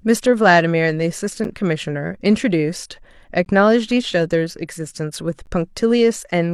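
Speech clip with a gap between stream segments. Segment timestamps leave small holes every 2 s, which play as hard-edged silences of 7 to 14 ms at 1.44, 3.45 and 5.46 s.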